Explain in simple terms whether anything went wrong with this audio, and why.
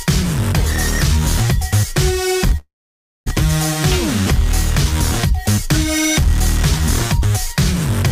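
A long network dropout hits from 2.57 to 3.27 s. The sound briefly smears into a fading buzz, then goes silent for about half a second, likely because audio stopped arriving. When it resumes, about 0.7 s of material is simply gone.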